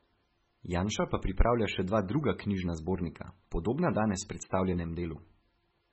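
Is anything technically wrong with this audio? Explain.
Yes. Throughout, the speech stops dead above 8 kHz and sounds watery and swirly, with smeared consonants: likely heavy MP3 compression, consistent with a very low bitrate around 16 kbps, cutting the treble and dropping weak frequency lines.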